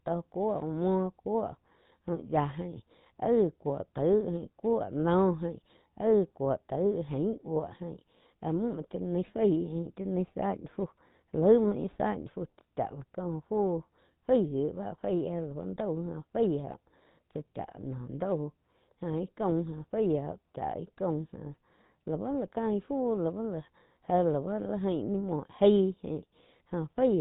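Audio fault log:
throughout, GSM full-rate codec: the speech sounds buzzy and gravelly, with nothing above 4 kHz. This fits a 13 kbps codec that rebuilds a vocal-tract model from sparse, regularly spaced pulses. A spectrogram shows a hard 4 kHz ceiling and grainy, smeared harmonics.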